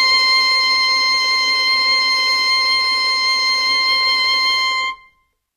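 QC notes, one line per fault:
Throughout, HE-AAC compression: the treble sounds gritty and metallic, with nothing above 14.9 kHz. Likely low-bitrate HE-AAC, consistent with about 24 kbps, rebuilding the top band from copied lower bands, so its harmonics don't align with the real ones.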